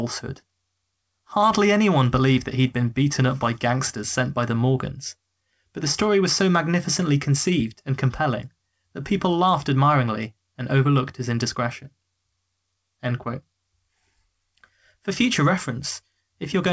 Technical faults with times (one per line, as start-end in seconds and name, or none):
none